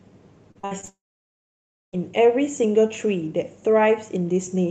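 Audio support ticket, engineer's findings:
Repeated packet loss (robotic sound), 0.51 to 0.89 s: five separate gaps in the packet stream, longest 56 ms, each filled by stretching the previous audio. About half of this span is concealment, so the speech turns choppy, with pieces missing.

Long network dropout, 0.89 to 1.95 s, likely cause: no packets arrived for about 1 s. The last sound is briefly carried on, then near-silence holds for roughly 0.97 s. Speech resumes after 1.95 s with the lost section gone.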